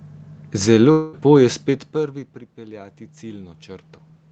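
From 0.91 to 1.15 s the sound smears into a fading buzz for about 0.21 s, then picks up with a bit missing, likely a long network dropout.

Between 1.92 and 3.95 s there's automatic gain rising: after the talker moved back around a second and a half, the gain creeps up about 5 dB, lifting voice and room noise together.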